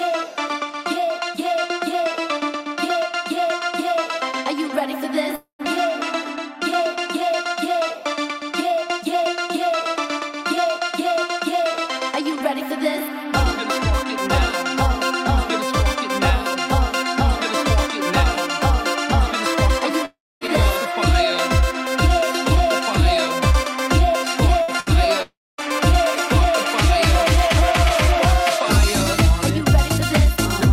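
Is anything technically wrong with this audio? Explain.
Yes. At 5.35 to 5.62 s, 20.05 to 20.44 s and 25.22 to 25.61 s there are gaps that sound like a long network dropout, likely a stall in arrival. The last sound is carried on and fades to silence, and roughly a quarter to a third of a second of audio is lost each time.

A burst of packet loss occurs at 24.62 to 24.71 s and again at 24.80 to 24.89 s. The receiver fills each 60 ms hole by extending the preceding sound and letting it decay, then jumps ahead past the missing audio.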